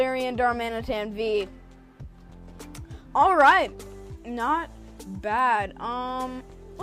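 Lost LE Audio frames at 2.03 s: a gap of about 10 ms, which fits a single dropped LC3 frame on the Bluetooth LE Audio link. With nothing to decode, the LC3 decoder filled the hole by repeating the previous frame's spectrum with its signs randomised, so the moment sounds like a tiny grainy blur rather than a click or a silent dropout. Being this short, the concealment never reached its fade stage. The light codec compression underneath leaves at most a faint watery texture.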